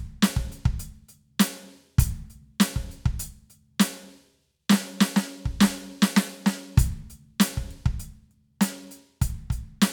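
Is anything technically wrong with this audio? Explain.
No, nothing in this music recording points to a technical problem, with the signal holding steady and intact throughout.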